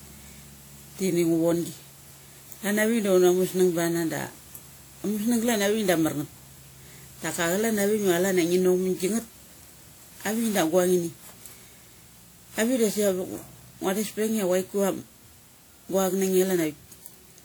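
From start to finish the speech carries generation loss: a swirly, hollow, smeared quality, with consonant attacks softened. It is likely the result of repeated lossy re-encoding, around ten passes, each re-quantising on a shifted frame grid so that noise and gaps accumulate; the character points to WMA 1 at about 96 kbit/s. A spectrogram shows flickering holes and blotchy high bands with nothing above 20.1 kHz, and the waveform's transients look rounded.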